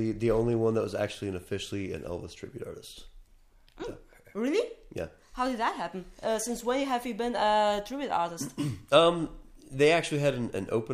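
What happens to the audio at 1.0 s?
At 1.0 s the audio carries sample clock jitter, present across the whole clip. The converter's clock wanders by roughly a microsecond. Steep parts of the waveform land slightly off. This adds a faint hiss about 40 dB below the signal. It grows with loud, bright passages and vanishes in silence.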